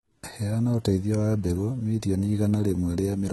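Throughout the speech the sibilants sound gritty and metallic, likely from heavy HE-AAC compression rebuilding the treble from copied lower bands, consistent with about 16 kbps.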